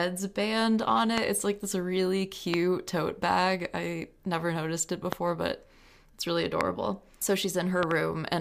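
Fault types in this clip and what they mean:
Loud pop: A sudden electrical pulse is added on top of the speech, likely from a switch, plug or static. Four single sharp pops stand far above the voice. Near the end comes a quick double pop. The speech carries on underneath.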